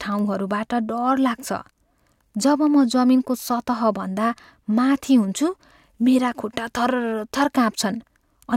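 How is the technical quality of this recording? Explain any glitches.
Listening through the recording, nothing stood out as a technical problem, so there are no glitches to explain.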